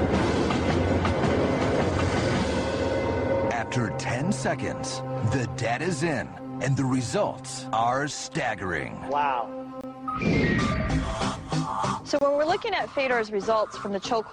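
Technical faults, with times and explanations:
9.81 s and 12.19 s: gap at a join of encoded pieces. Separately encoded segments were spliced without trimming encoder delay and padding, leaving a gap of about 25 ms with edges smeared by the codec before the sound resumes.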